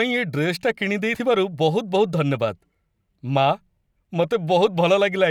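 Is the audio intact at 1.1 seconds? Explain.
No. At about 1.15 s the speech skips forward, with roughly a twentieth of a second missing and the two sides butted together without any gap of silence. This is audio missing between chunks. The likely cause is a recorder or processor handling the signal in 2-second blocks and dropping a short stretch while closing one block and opening the next, so the waveform jumps straight from before the loss to after it.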